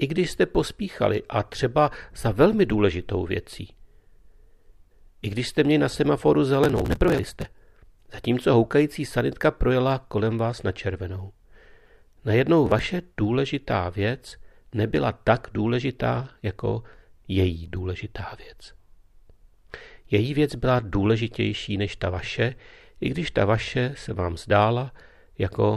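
At 6.64 s the speech breaks into processor overload crackle lasting until 7.52 s, and a shorter burst returns from 12.67 to 12.86 s. The processor fell behind and missed buffer deadlines repeatedly, dozens in the first burst, and each missed block, which points to buffers of about 5 ms, was skipped outright. The result is rapid, gritty tearing across the sound. Unlike a single dropout, it is a dense run of tiny hard-edged gaps.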